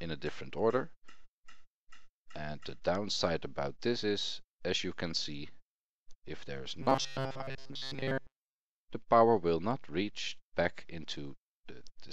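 From 6.82 to 8.60 s, robotic sound from repeated short buffers: a rigid 134 Hz buzz following the sound's shape, unlike steady hum, likely from a looping 7.5 ms chunk.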